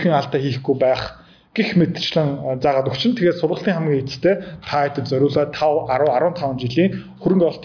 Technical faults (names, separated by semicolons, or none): none